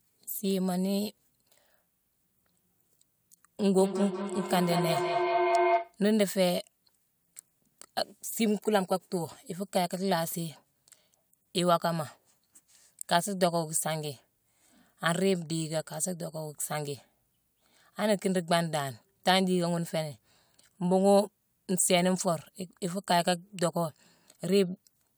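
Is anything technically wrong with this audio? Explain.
Yes. From 3.63 to 5.99 s there is a feedback howl: two devices in one room share the call, so sound circles from loudspeaker to microphone, gaining on each pass. It narrows to a tone near 700 Hz, pulsing roughly every fifth of a second, and peaks at about the speech's level.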